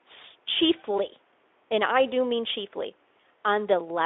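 Nothing stood out on listening to this speech clip.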